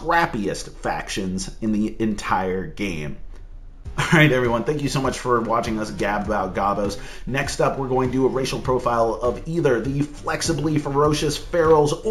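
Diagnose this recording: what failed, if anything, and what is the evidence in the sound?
Imaging from linear upsampling runs throughout, introduced at the sample-rate conversion stage. The top of the band is dulled, with a faint metallic shimmer on bright sounds. A mirrored copy of the spectrum sits between 8 and 16 kHz, roughly 30 dB down, which fits a 16 kHz source raised to 44.1 kHz by straight-line interpolation, too weak a filter to remove the images.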